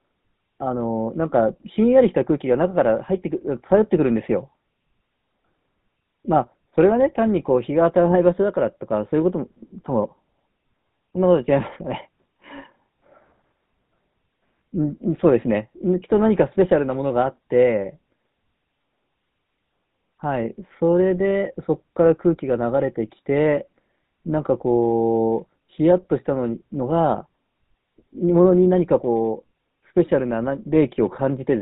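GSM full-rate codec damage runs from start to finish. The speech is rebuilt from a vocal-tract model driven by sparse, regularly spaced pulses, which fits the 13 kbps full-rate scheme. Everything above 4 kHz is gone, and the voice carries a plainly audible buzzy, gravelly roughness.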